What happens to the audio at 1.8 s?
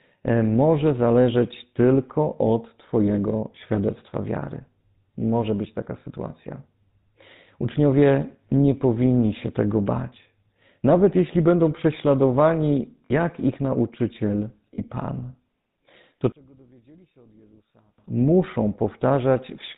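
The speech at that point, like the rest of the clip, has passed through the GSM full-rate codec. That coder keeps a model of the vocal tract and rebuilds the excitation from regularly spaced pulses, discarding two of every three samples, which fits a 13 kbps coder. Nothing above 4 kHz survives. What you hear is a plainly audible buzzy, gravelly roughness on the voice, with the top end missing.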